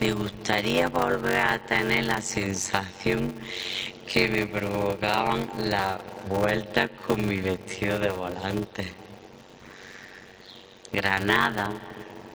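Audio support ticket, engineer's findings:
Block size mismatch (padded), throughout. Steady buzz at 93.8 Hz under all the audio. Playback slow, 0.625x speed, pitch near normal. Short silent gap every block. Probable component: buffer handoff between two stages. Writer delivers short blocks and the reader zero-fills the remainder. Buzz rate fits a 512-sample read buffer. Speed ratio fits about 320 samples written per block.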